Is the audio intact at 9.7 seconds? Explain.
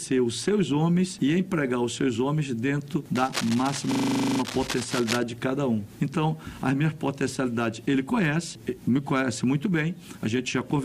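Yes, the audio is intact at 9.7 seconds, with no dropout, click, distortion or other fault heard at that moment.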